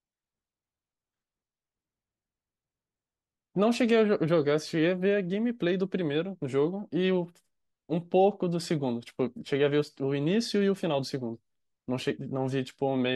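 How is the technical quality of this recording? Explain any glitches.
No glitches can be heard anywhere in the recording.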